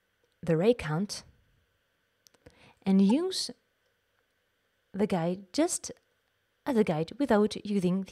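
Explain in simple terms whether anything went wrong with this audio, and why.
At about 3.10 s there is a tiny, split-second glitch that doesn't belong to the rest of the sound. This is damaged data in a compressed stream. A small piece of the compressed file was corrupted, so the player couldn't read that stretch properly. While it hunted for the next readable chunk of data, the sound glitched briefly before the audio picked up again.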